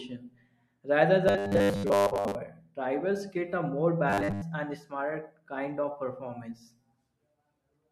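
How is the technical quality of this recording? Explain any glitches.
The recording has two stretches of robotic sound from repeated short buffers, at 1.28–2.35 s (ending just before "drivers get a more") and at 4.10–4.45 s (just after it). New audio likely arrived too seldom, so a roughly 10 ms slice was replayed over and over, replacing most of the real signal. That forces a rigid, metallic 100 Hz buzz that still loosely tracks the speech. On a spectrogram this appears as evenly spaced horizontal harmonics at multiples of 100 Hz. The waveform shows identical, repeating short cycles.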